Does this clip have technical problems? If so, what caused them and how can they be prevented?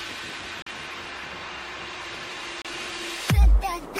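Yes. The audio cuts out twice, from 0.62 to 0.67 s and from 2.62 to 2.65 s, each a short hole of silence. This is likely a Bluetooth dropout. Roughly 43 ms and 29 ms go missing, which fits two or three wireless packets arriving too late to play. The sound then resumes further along, as though it had kept running underneath. Keeping the headphones close to the source and away from Wi-Fi and other 2.4 GHz interference helps prevent it.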